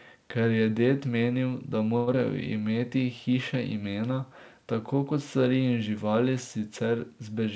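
Speech carried over a G.722 call path, band-limited to 8 kHz, has three jitter-buffer timing faults. Right after "je ded menil da", a short stall from a late packet holds the last sound for 100 ms, from 1.97 to 2.10 s, while the buffer sits empty and the delay grows by 100 ms. Immediately after, at 2.13 to 2.16 s, a skip ahead drops around 70 ms of queued audio, joining both sides almost directly and shedding part of that extra delay. From 2.54 to 2.89 s, just before "hiše imena tako kot", a jitter buffer slow-down repeats pitch periods to add 54 ms, so the sound runs at 87% speed at unchanged pitch.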